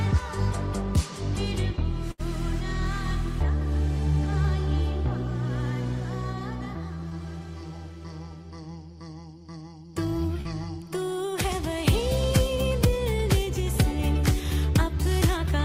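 From 2.11 to 2.21 s a burst of packet loss leaves about 80 ms that never arrived. The receiver stretches the last sound for about 75 ms, fading it into a held buzz or hiss. Playback then resumes further on, skipping material, which a brief glitch doesn't do.

Short concealed packet loss appears at 7.09 to 7.13 s (20 ms) and 10.41 to 10.47 s (40 ms). Each hole is patched by extrapolating the preceding sound and crossfading back, giving a quick smear or wobble rather than an audible fade and jump.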